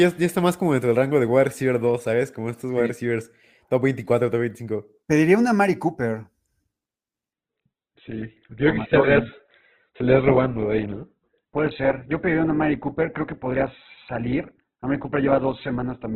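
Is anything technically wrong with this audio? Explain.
Yes. At 7.33 s the speech drops suddenly to an adaptive stream at a lower bitrate, lasting to the end. A slowed connection made the player switch versions. There is no gap. Nothing remains above 4.1 kHz, so the sound turns dull, with more codec artefacts. This fits Opus falling from 64 to 8 kbit/s.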